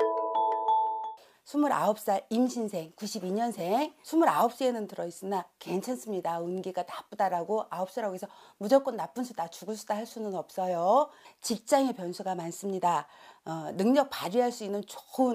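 From 12.05 to 13.68 s, channel delay (comb filtering) appears: one channel lags by roughly a single sample, about 0.02 ms, before mono summing. The first notch sits near 20 kHz, so this brief stretch is slightly dulled at the very top rather than hollow or phasey. That lone high notch separates it from longer-delay combing.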